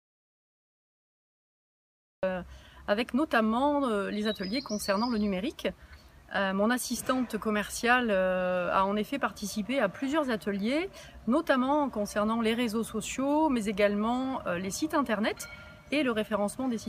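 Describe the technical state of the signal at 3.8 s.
The signal at 3.8 s is intact, with no dropout, clipping, glitch or other fault audible at that moment.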